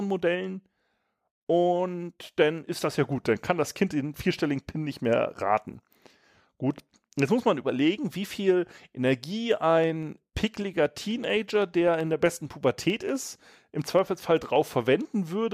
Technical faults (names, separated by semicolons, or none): periodic USB or driver dropouts